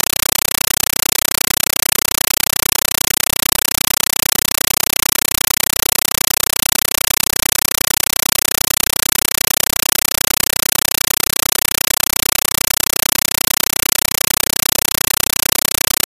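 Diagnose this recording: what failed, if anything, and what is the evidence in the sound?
The whole clip is a compressed stream played as audio. At the playback stage, across the digital link, the sound is replaced by loud, chattering static. It repeats 31.25 times a second, each burst about 8 ms long and followed by silence. That rhythm fits AC-3 frames of 1536 samples at 48 kHz, probably at 384 kbps. The receiver treated the encoded bitstream as ordinary samples instead of decoding it, so each frame's data became noise and its zero padding became silence.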